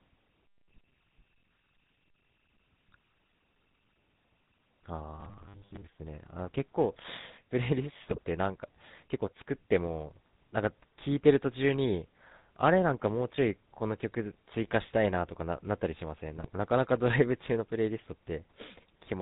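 Throughout, the speech carries GSM full-rate codec damage: a plainly buzzy, gravelly texture and nothing above 4 kHz, which fits a 13 kbps vocal-tract model. From 5.21 to 5.83 s the sound turns into a rigid metallic 100 Hz buzz, likely robotic sound from repeated short buffers, with roughly 10 ms segments replayed in place of most of the real audio. At 8.08 to 8.18 s and again at 16.37 to 16.47 s, GSM bit errors corrupt the decoder's filter and gain values, producing brief squawks, pops and gargling.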